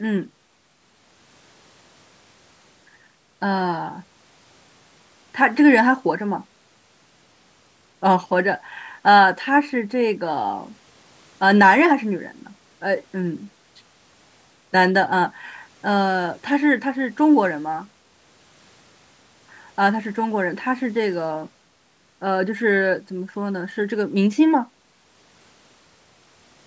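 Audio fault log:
No faults: the speech bears the normal call microphone processing, with the lowest bass rolled off by its high-pass filter and nothing present above 8 kHz.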